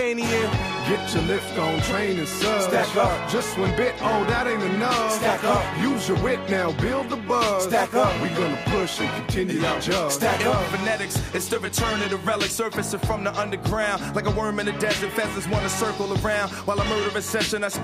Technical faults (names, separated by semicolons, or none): none